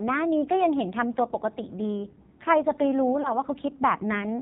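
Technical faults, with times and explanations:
Throughout, AMR narrowband mobile codec: everything above 4 kHz is gone, so the speech sounds boxed-in and phone-like. The codec rebuilds the voice from a simple vocal tract model fed by a handful of pulses per 5 ms slice. Here it's starved for bits, which fits one of the low AMR-NB modes around 5.9 kbps. You get a buzzy, synthetic edge to the voice and heavy codec damage across the clip.
3.22 to 3.33 s, lost AMR speech frames: there's a short warble and dip in the speech, consistent with a single 20 ms frame failing its checksum after a radio error. The decoder covers the gap by reusing the last good pitch and vocal tract settings at reduced gain, which produces that smeared, wobbly patch. The voice then takes a moment to firm up again, so the roughness runs on a bit past the missing frame itself.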